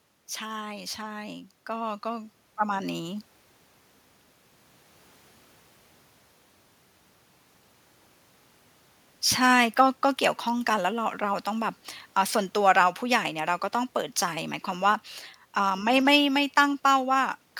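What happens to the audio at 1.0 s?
At 1.0 s the automatic gain control is in the middle of an automatic gain rise. It has judged the input too quiet and is raising its gain gradually, from 0.39 s to 3.32 s, by about 11 dB. Speech and background noise swell together.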